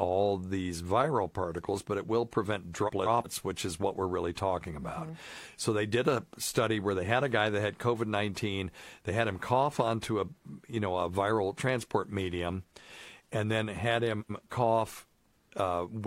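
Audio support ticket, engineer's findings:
Frames out of order in the speech at 2.87–3.27 s and 14.20–14.42 s. Garbled flutter, two adjacent chunks of about 186 ms and 93 ms played swapped, nothing lost. Points to packet reordering upstream of the decoder.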